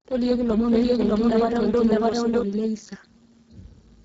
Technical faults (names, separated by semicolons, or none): Speex codec; doubled audio track